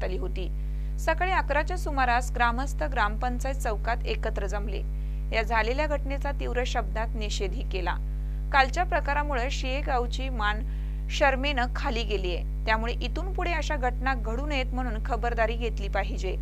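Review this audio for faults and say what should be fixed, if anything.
Nothing here needs fixing; no faults are audible.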